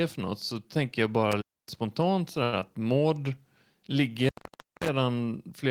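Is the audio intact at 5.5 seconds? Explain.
Yes, the speech at 5.5 seconds plays through intact, with no dropout, click, distortion or other fault at that moment.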